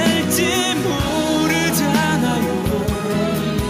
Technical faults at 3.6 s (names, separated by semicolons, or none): none